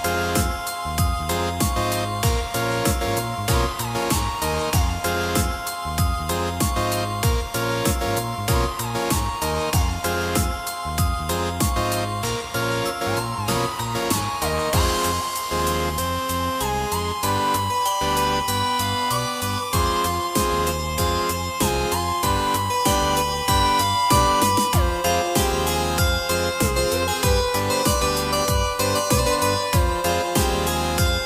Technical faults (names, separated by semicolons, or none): none